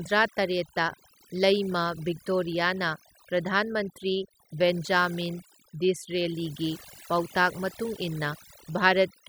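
From start to finish the speech carries overdone noise removal: a noise reduction stage set far too aggressively, shutting off individual frequency bands wherever their level sat close to its noise estimate. The pauses fall to near silence sprinkled with twinkling specks, and softer parts of the voice are stripped along with the noise. Unlike a plain noise gate, which mutes everything at once, the damage here is scattered band by band.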